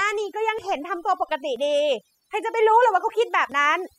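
From start to finish the speech has a near-silent background flecked with twinkling specks. This is overdone noise removal: the reduction was set so hard that frequency bands near the noise estimate were cut away, taking the speech's quieter detail with them.

Tiny skips land at 0.59, 1.56, 2.54 and 3.52 s, each dropping roughly 20 ms and butting the two sides together. The regular one-second spacing points to audio missing between chunks, likely lost as the processor closed one chunk and started the next.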